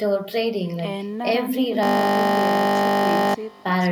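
Echo with no canceller runs throughout: the far end's loudspeaker feeds its microphone, returning a faint, thin copy of the speech, about 28 dB down, roughly a third of a second late. A system hang loop runs from 1.83 to 3.34 s. The playback froze while the hardware kept cycling one 20 ms buffer, repeating it dozens of times as a steady 50 Hz buzz.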